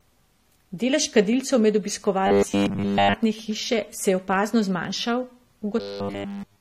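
Throughout, the speech shows transcoding between lossy codecs, likely an HE-AAC stage followed by AAC-LC. Mixed artefacts blur together, and nothing survives above 16.5 kHz.

From 2.27 to 3.15 s, and again from 5.80 s to the end, comes robotic sound from repeated short buffers. It is likely caused by starved playback looping 10 ms chunks. It produces a rigid, metallic 100 Hz buzz.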